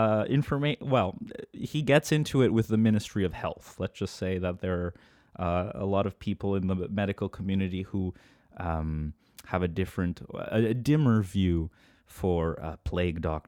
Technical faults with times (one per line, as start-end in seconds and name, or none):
none